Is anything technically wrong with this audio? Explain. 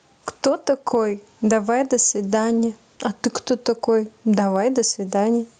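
Yes. Gain pumping runs through the whole speech clip. The gain ducks under each loud syllable and recovers between them, a level swing of roughly 10 dB, which squashes loud and soft passages together. The likely cause is input gain set far too high, with a fast limiter or compressor clamping down on each peak. Unlike a noise gate, which silences the gaps, this lets the level of the gaps come back up.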